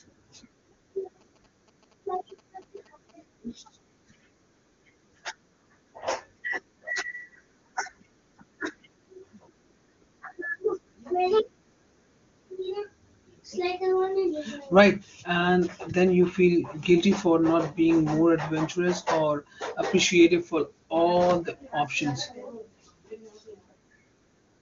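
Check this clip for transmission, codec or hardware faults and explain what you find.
One fault is present, in the opening seconds of the speech.

GSM signalling bursts, 1.21 to 3.11 s: a nearby 2G phone's signalling radio bursts are rectified by the audio circuitry, giving a galloping dit-dit-dit of short buzzes at 217 Hz. They sit well below the speech. The wideband codec sound tops out near 7.3 kHz, consistent with AMR-WB at a high rate.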